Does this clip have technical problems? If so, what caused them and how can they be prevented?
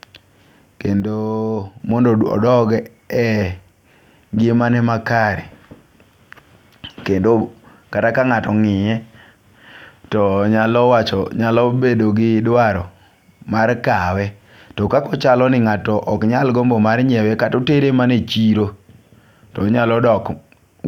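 Yes. A sudden gain jump drops the speech and background about 6 dB at 1.0 s, recovering at 1.8 s, likely an unramped gain change. Apply gain changes with short ramps.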